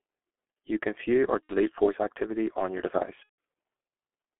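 Speech coded with the G.723.1 codec at 6.3 kbit/s throughout, heard through a telephone band of roughly 250 Hz to 3.4 kHz. Damage from the codec is heavy. The low rate and slowly updated vocal model leave the voice muffled and hoarse, and consonants are smeared because the coder cannot track fast spectral changes within its long frames. There are also two bursts of VoIP packet loss concealed by the speech codec. The first runs from 1.44 to 1.55 s, after "can view or" and before "voice activity on your". About 60 ms of audio is missing, which fits two 30 ms frames. The second runs from 3.23 to 3.35 s, after "voice activity on your", with about 150 ms missing, consistent with five frames. In both gaps the decoder repeats its last pitch and filter at falling gain, so the sound turns into a fading buzzy tone or coloured noise. The voice stays weakened briefly after real packets resume, because each frame's state builds on the previous one.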